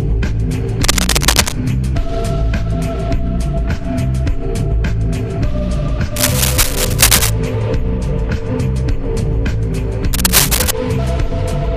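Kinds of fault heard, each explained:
Cable scratch noise: A worn cable, connector or control was likely being disturbed, its contact resistance jumping about and injecting dense, irregular bursts of noise into the signal path. Here that comes through as rough scratching and rustling layered over the sound, at about the same level as the sound itself, in three separate episodes: from 0.83 to 1.54 s, from 6.16 to 7.30 s, and from 10.13 to 10.71 s.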